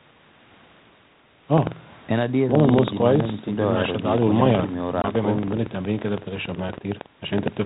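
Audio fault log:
1.49–7.66 s, buffer tearing: a steady robotic rattle near 21.5 Hz under the speech, from writer and reader crossing each 2048-sample buffer, splicing in audio about a tenth of a second old.
5.02–5.05 s, packet loss on an ADPCM call: a hard 20 ms hole, then brief distortion as the decoder's predictor and step size resync after roughly one lost packet, over lightly coloured 32 kbit/s G.726.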